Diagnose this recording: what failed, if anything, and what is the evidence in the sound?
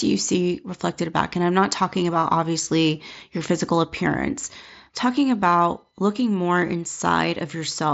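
A single voice packet on the Bluetooth link between headset and phone was dropped, and the receiver filled the gap by repeating the closest-matching stretch of recent waveform. This is concealed Bluetooth headset packet loss. At 7.31 s a very brief, almost seamless patch of about 7.5 ms passes under the wideband mSBC audio, which fits one lost frame.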